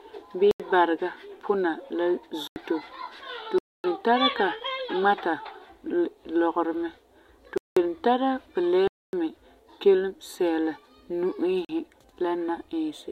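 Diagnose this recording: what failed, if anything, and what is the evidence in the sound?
Driver-level buffer underruns: blocks of digital silence at 0.51, 2.48, 3.58, 7.58, 8.88 and 11.65 s, 40 to 260 ms long.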